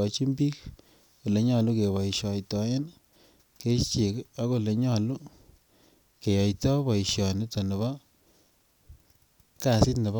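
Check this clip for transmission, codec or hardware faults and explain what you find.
One fault is present: between 6.85 and 7.24 s, four brief ticks cut into the speech, each under a millisecond. These are CD scratch ticks: a scratch on the disc corrupted more data than error correction could repair, so the player patched over the damaged samples.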